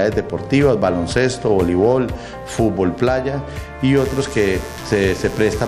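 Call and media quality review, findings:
Mains buzz, 3.97 s to end of clip (5.68 s). Steady raspy buzz, roughly 20 dB below the signal, built on 60 Hz harmonics reaching into the kilohertz range. Probable component: unshielded cable, nearby dimmer or rectifier supply. Mechanism: sharp switching spikes twice per mains cycle coupling into the audio path.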